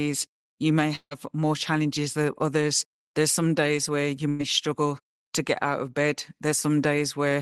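Speech with two gaps in it. From 0.95 to 1.13 s, just before "more challenges than others," the last sound is stretched into a fading buzz or hiss for about 155 ms and then goes silent for about 70 ms. Around 160 ms of speech is lost. This is likely a long network dropout. A spectrogram shows smeared, decaying energy and then a blank band. From 4.29 to 4.41 s, between "some days where you" and "struggle to get out," a burst of packet loss replaces about 100 ms of speech with a held, fading continuation of the preceding sound. There is no silent tail. The waveform shows a shrinking, repetitive envelope, and then the speech resumes with that part missing.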